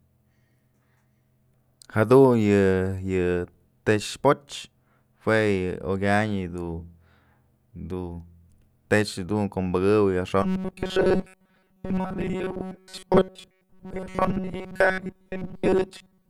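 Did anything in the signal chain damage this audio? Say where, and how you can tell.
Yes, from 10.43 s to the end at 16.30 s the speech turns into a robotic, metallic 188 Hz buzz. That's likely a starved driver or buffer stage looping roughly 5 ms chunks, repeating most of the audio.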